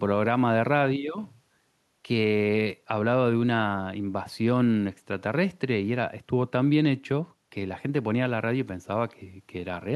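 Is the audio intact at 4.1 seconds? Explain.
Yes, the speech at 4.1 seconds plays through intact, with no audible dropout, click, distortion or other fault at that moment.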